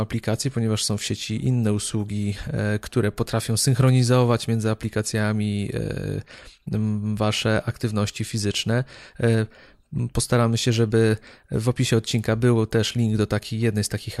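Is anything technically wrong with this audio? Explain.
No, nothing technically wrong.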